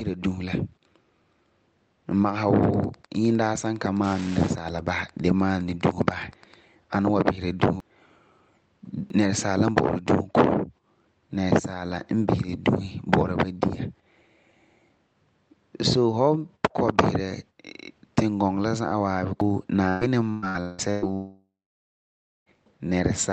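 From 2.60 s to 6.54 s a steady ticking sits under the speech, ending just before "ani n". This is Wi-Fi interference. A nearby radio's beacon, repeating every 102.4 ms, is rectified by the audio circuitry, producing about ten ticks a second at roughly 25 dB below the speech. On a waveform it shows as evenly spaced small spikes. On a spectrogram it shows as a comb of thin vertical lines running the full height of the plot.

Sudden jumps in the sound occur at 6.32 s, 7.80 s, 9.10 s and 19.41 s. These fit a dropped buffer (overrun), likely because the software fell behind and the hardware overwrote samples before they were read. Nothing falls silent. The audio simply skips ahead, losing about a tenth of a second at 6.32 s and 9.10 s, about a fifth at 19.41 s, and nearer a third at 7.80 s. On a waveform each appears as a hard discontinuity. On a spectrogram each is a vertical broadband line with mismatched content on either side.

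Between 19.88 s and 21.05 s the speech turns choppy. This is repeated packet loss with a robotic sound. Five gaps follow one another closely, the longest about 179 ms, and each is patched by stretching the preceding sound, so roughly half the span is synthetic filler. A spectrogram shows smeared, flattened harmonic bands alternating with genuine speech. The waveform shows repetitive, unnaturally regular stretches.

From 21.14 s to 22.49 s comes a long network dropout, likely from audio failing to arrive at all. The last sound is drawn out and fades, then nearly a second of silence follows before the speech resumes further along. On a waveform this is a decaying tail followed by a flat line. The spectrogram shows a smear fading into an empty band. Throughout, the spectrogram tops out around 8 kHz, consistent with the Opus call path's bandwidth.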